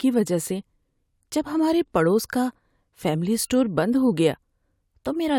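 No technical faults are audible.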